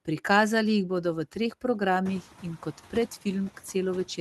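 Noise suppressor artifacts run through the whole speech clip. The suppressor estimates which bands hold steady noise and pulls them down by about 9 dB, frame by frame, so the background dips in the gaps and swells back under the talking. Around 2 s the room noise steps up by about 19 dB, still sitting about 20 dB below the speech. The call path also cuts off the high frequencies at roughly 12 kHz.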